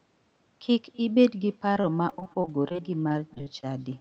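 From start to finish, an echo with no canceller is present: the far end's loudspeaker feeds its microphone and nothing removes it, so the speech returns after roughly a third of a second as a faint, thin shadow, about 28 dB below the direct sound.

From 1.73 s to 3.65 s, repeated packet loss sets in. Audio keeps dropping out in short bursts, the longest about 23 ms, and each hole is patched by stretching the preceding sound. About 18 percent of that stretch is filled in this way, giving the speech a choppy, robotic edge.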